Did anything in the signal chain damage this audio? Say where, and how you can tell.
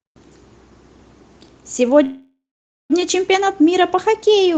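Yes, a call audio freeze at 2.03–2.92 s, likely network: the jitter buffer ran dry, the speech smeared into a fading buzz or hiss then about 0.49 s of silence, then resumed intact, just late.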